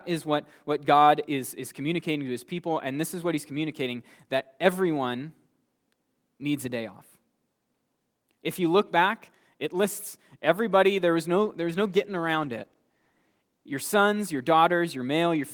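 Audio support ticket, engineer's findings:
Call bitrate drop after "lists everybody there was", 11.37 to 14.21 s: encoder squeezed from 32 to 18 kbps, speech goes coarse and dull, bottoms out about 1.8 s.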